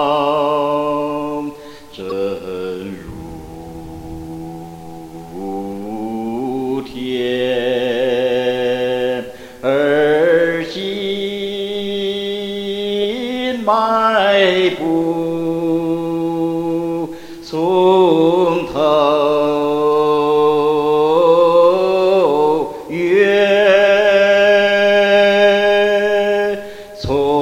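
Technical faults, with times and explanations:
2.08 to 2.12 s, damaged data in a compressed stream: a short stretch of the encoded stream arrives corrupted, so the decoder misreads those frames, loses sync and hunts for the next valid frame header, leaving a brief chirp, squawk, click or short hole in the sound.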